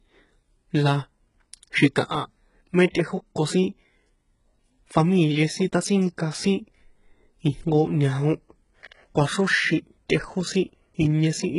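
Throughout the speech, the treble is synthetic: s sounds come out gritty and lispy, with nothing above 11.1 kHz. This heavy damage points to HE-AAC compression at a very low bitrate, likely around 12 kbps, where the upper band is rebuilt from copied lower bands rather than coded.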